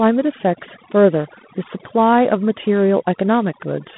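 From the first moment to the end, the speech carries overdone noise removal. Frequency bands sitting near the noise floor have been pulled down hard, taking quiet speech detail with them, so pauses fall to near silence sprinkled with twinkling specks. A spectrogram would show isolated dots scattered across a dark background.

Also present throughout is G.726 ADPCM coding. The speech sits in a telephone band of 150 Hz to 3.6 kHz, with nothing above 3.8 kHz, and carries a plainly audible rasping hiss that rises and falls with the speech level. That fits the 24 kbit/s mode. A spectrogram would show a flat ceiling at 3.8 kHz and grainy noise filling the bands under the speech.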